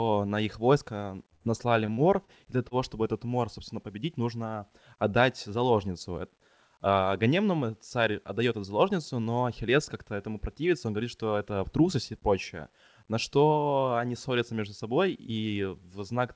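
At 1.34 s a burst of packet loss hits the call: several packets in a row fail to arrive in time, and the receiver covers the hole by extending the last stretch of speech for about 63 ms while turning it down. When the real audio returns at 1.43 s, roughly 60 ms of speech has been skipped. The result is a brief held, fading sound followed by a jump forward in the speech.

From 1.86 to 2.31 s, repeated packet loss gives a robotic sound. Packets go missing four separate times in under half a second, the longest gap being 32 ms. Each gap is patched by continuing the preceding sound, about 88 ms of patching in total, and roughly 60 ms of speech never reaches the listener. About a fifth of this span is synthetic fill, so the speech turns choppy and mechanical, with small pieces dropped out.

At 2.68 s comes a short concealed packet loss lasting until 2.74 s. About 30 ms of audio misses the decoder, which bridges the hole with roughly 31 ms of sound extrapolated from what came just before and then blends back into the real signal. 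It is heard as a quick smear or wobble in the speech. The band-limiting of the call path, with nothing above 8 kHz, fits a 64 kbps G.722 codec.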